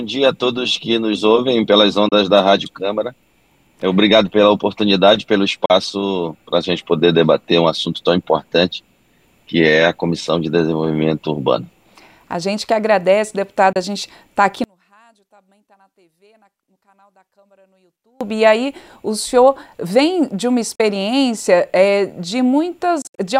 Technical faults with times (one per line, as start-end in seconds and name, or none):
2.09-2.12 Bluetooth dropout
5.65-5.70 Bluetooth dropout
13.73-13.76 Bluetooth dropout
14.64-18.21 one channel inverted
20.75-20.80 Bluetooth dropout
23.02-23.20 Bluetooth dropout